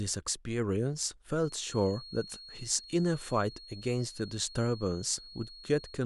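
From 1.37 s to the end of the speech, a feedback whistle sits behind the voice: a thin, steady tone near 4.3 kHz, roughly 20 dB below the speech, swelling and fading slowly in level. It is likely a loudspeaker-to-microphone loop held just at the edge of feedback, sustaining one frequency without building up. On a spectrogram it shows as a single unbroken horizontal line at 4.3 kHz; the waveform shows little, since the tone is so much quieter than the speech.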